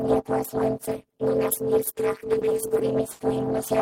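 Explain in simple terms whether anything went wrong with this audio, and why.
At about 2.39 seconds there is a short concealed packet loss: roughly 20 ms of the audio arrived too late for the receiver to play. The receiver filled the hole by carrying the preceding sound forward, then blended back in, leaving a tiny smear or wobble.

From 3.11 to 3.21 seconds there is a burst of packet loss, where about 80 ms never arrived in time. The receiver stretched the last bit of sound across the gap while fading it down, then jumped ahead, so that stretch of the recording is missing.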